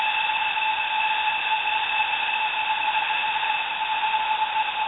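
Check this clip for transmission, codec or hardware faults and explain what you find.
One fault is present. The music is missing for the entire clip, from 0.00 to 4.88 s, and steady low-level noise plays in its place. This is sound dropped by the voice detector. The sender's detector likely classed the music as background and stopped transmitting, so the receiver generated comfort noise to fill the gap. On a waveform this appears as a flat, even band of low amplitude with no transients. A spectrogram shows smooth, featureless noise with no harmonic lines and nothing above 4 kHz, which is the band limit of the narrowband call codec.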